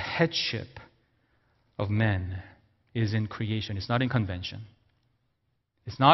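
No technical faults can be heard anywhere in the speech recording; the signal stays continuous and intact throughout.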